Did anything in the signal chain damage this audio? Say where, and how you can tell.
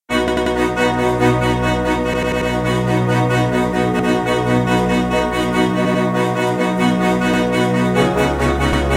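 Yes. At the driver/buffer stage, new audio arrived late and the last buffer replayed, causing repeated buffer stutters at 0.28, 2.14, 3.99, 5.85, 7.34 and 8.73 s. Each stutter repeats a 93 ms chunk one to four extra times, which fits a 4096-sample buffer.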